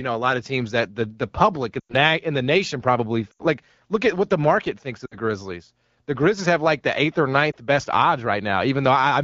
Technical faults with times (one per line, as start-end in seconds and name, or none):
1.80-1.94 lost AMR speech frames
3.31-3.46 lost AMR speech frames
5.05-5.18 lost AMR speech frames
7.51-7.56 lost AMR speech frames